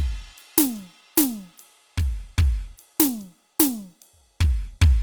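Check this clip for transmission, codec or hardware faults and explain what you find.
One codec fault runs through the whole clip: Opus compression. The music sounds rough and grainy, and its tones turn noisy. The likely cause is Opus in its CELT music mode running short of bits, which fits about 24 kbps. It fills starved bands with folded copies or noise. The bandwidth stays full, reaching 20.2 kHz.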